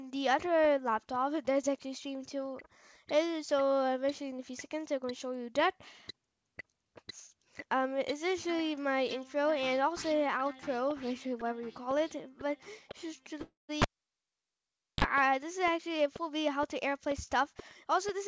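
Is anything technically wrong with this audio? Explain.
Yes, there are three faults, all in the last third of the clip.

Call audio freeze, 13.42 to 13.71 s: the sound stops and the final fragment is stretched into a fading buzz, with about 140 ms of silence, before playback resumes where it left off. The likely cause is delayed packets draining the jitter buffer. About 268 ms of gap is inserted, with nothing lost.

Cable pulled and plugged in, 13.82 to 15.04 s: a pop, then roughly 1.18 s of near silence as the live cable is out. A brief 37 ms burst of 50 Hz mains buzz follows while only the plug tip makes contact, then a second pop as the signal returns.

Jitter buffer speed-up, 15.78 s to the end at 18.27 s: the audio plays about 4% fast at unchanged pitch. The receiver is trimming many short pitch-period slices to shrink an overfilled buffer, removing about a tenth of a second in total.

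The call codec path has no content above 8 kHz, consistent with G.722 at 64 kbps.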